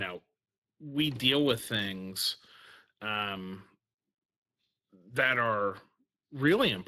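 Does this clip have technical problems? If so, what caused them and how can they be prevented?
Yes. Throughout the speech the sound carries plainly audible Speex codec damage. Speex is a CELP codec: it models the vocal tract with a filter and spends a limited bit budget on the excitation signal that drives it. The resulting loss of detail can be heard across the whole clip, and the rate it points to is around 22 kbps. Nothing is present above 15.4 kHz, a band limit set by the codec. To prevent this, record or transmit with a modern codec such as Opus at an adequate bitrate, or keep an uncompressed source.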